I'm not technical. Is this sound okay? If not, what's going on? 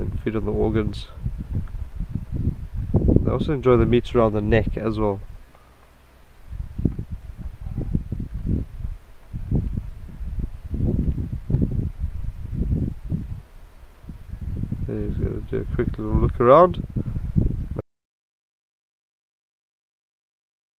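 No. Audio dropout to silence at 17.8 s: the sound stops dead into total silence until the end, likely because the input was lost mid-recording.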